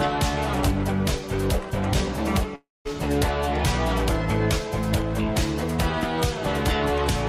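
A long network dropout runs from 2.55 to 2.87 s. The sound stops arriving, and the receiver fills the gap for about 0.3 s by carrying the last sound forward as a buzz or hiss that fades away, leaving 210 ms of near silence. When the audio returns, 300 ms of material is simply missing rather than delayed. The cause is likely a run of lost packets that the receiver tried to cover by extending what it last had.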